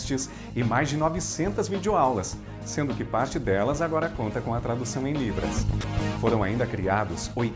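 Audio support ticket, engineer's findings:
Sound gives way to brief steady noise at 5.81 s, about 30 ms. Likely sound dropped by the voice detector, comfort noise filling the gap. G.722 path, nothing above 8 kHz.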